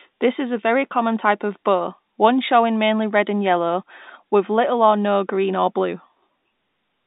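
Speech over a telephone line, and nothing is technically wrong with it.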